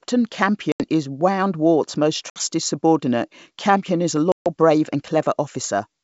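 Packet loss on an ADPCM call: runs of a few packets dropped and were filled with silence, leaving the decoder's predictor and step size out of step with the sender's. Hard-edged holes appear at 0.72–0.83 s (80 ms lost), 2.30–2.41 s (60 ms) and 4.32–4.49 s (140 ms, between "is a" and "brave and"). Each time, the wideband speech comes back slightly distorted before settling.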